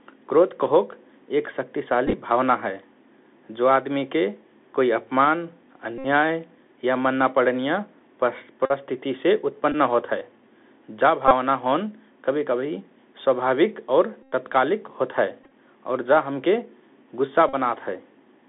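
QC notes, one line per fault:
Throughout: Bluetooth CVSD headset codec. The headset link encodes the audio one bit per sample, stepping up or down with an adaptive step size. The sound is confined to roughly 200 Hz to 3.5 kHz, which fits the 64 kbps narrowband headset path. The damage is plainly audible: a granular hiss sits under the speech, sibilants turn scratchy, and loud bright sounds distort where the step size cannot keep up.
2.07–2.14, 5.98–6.06, 8.66–8.72, 9.72–9.75, 11.28–11.32, 14.23–14.32, 15.44–15.51, 17.49–17.54: Bluetooth headset packet repeated. Voice packets between the headset and the phone were lost, and the chip replayed the previous packet's bits in their place. Each stretch of repeats cycles every 3.75 ms, which produces a buzz near 267 Hz. The loss runs from 18.8 ms at 9.72 to 93.8 ms at 14.23, where the buzz is longest. The first stretch comes after "क्रोध कहोक एक", and its 30 ms of loss is spread over 60 ms in short runs of up to about 10 ms. 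The stretch at 15.44 ends just before "और जा हमके", and its 48.8 ms of loss is scattered over 75 ms.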